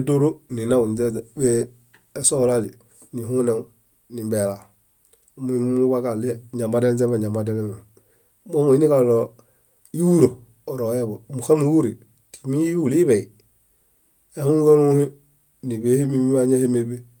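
No technical faults are audible anywhere in the speech recording.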